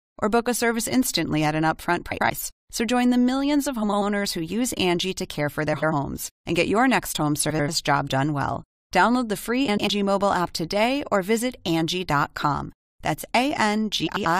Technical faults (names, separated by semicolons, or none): frames out of order